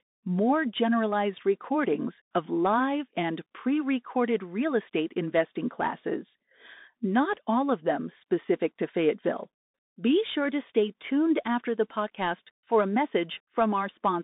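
From start to finish the speech runs through a Bluetooth CVSD headset codec, whose one-bit delta coding fits a 64 kbps link. Everything sits between 150 Hz and 3.7 kHz with nothing above 3.8 kHz, s sounds turn scratchy, loud bright moments distort, and a grainy hiss rides underneath.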